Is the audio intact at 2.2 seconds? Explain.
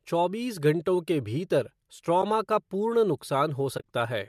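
No. At 2.22 s there is an AAC frame loss with muting: a piece of the coded stream went missing and the decoder replaced that stretch with silence by zeroing its spectrum. The gap is about 10 ms long, which fits a single dropped low-delay frame. Because the overlapping windows taper on either side, the sound fades out and back in rather than cutting hard, leaving a brief dip just before "का पूर्ण".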